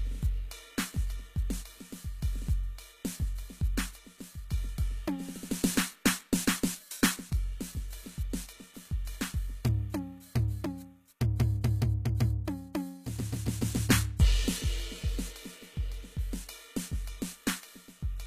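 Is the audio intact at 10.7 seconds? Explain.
No. There is a dropped buffer (overrun) at 10.66 s: a small jump forward in the music, with no gap of silence. The likely cause is that the recording program fell behind and the hardware overwrote samples it had not yet collected. A few milliseconds of audio vanished, and the two sides were butted together. That abrupt splice is what produces the slight skip.

The same moment also carries HE-AAC compression damage that runs through the whole piece. The treble sounds synthetic and gritty. This likely comes from HE-AAC encoding. That codec keeps only the lower spectrum and rebuilds the highs by copying lower bands upward, so the harmonics up there do not line up with the real ones. The plainly audible artefacts fit a bitrate around 20 kbps.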